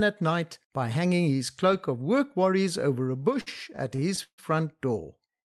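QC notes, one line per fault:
3.05–4.40 s, repeated stalls (stutter): after "cloak of work worries" the jitter buffer repeatedly ran empty and each gap was filled by extending the last sound, longest 146 ms, so the speech drags.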